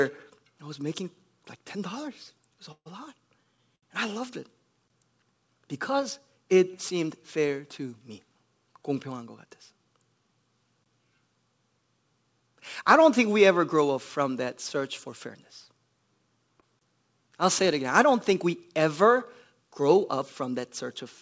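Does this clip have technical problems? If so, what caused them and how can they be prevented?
Yes. Between 2.72 and 3.84 s there are repeated stalls (stutter): three underruns, the longest about 137 ms, where the jitter buffer ran dry and the last sound was stretched. A larger or adaptive jitter buffer and steadier network delivery would prevent this.

A gap between chunks appears at 4.88 s after "loved it", at 10.84 s, and at 16.79 s before "I'll say it again". Each is a 21 ms silence at the 6-second chunk joins, likely from padding or late chunk playback. Gapless chunk concatenation, with padding trimmed, would prevent this.

Jitter buffer speed-up runs from 9.12 to 9.86 s at 108% speed, with roughly 70 ms removed, and from 13.81 to 14.77 s before "for fairness" at 104%, with about 50 ms removed. In both spans pitch periods were cut to drain excess buffered delay. Reducing delay bursts or using slower, gentler buffer adaptation would prevent this.

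At 16.60 to 16.64 s there is a short concealed packet loss: 20 ms never arrived and was filled by extrapolating the preceding sound, heard as a brief smear. Forward error correction or redundancy would prevent this.

These faults sit on a G.722 call path, which passes nothing above 8 kHz.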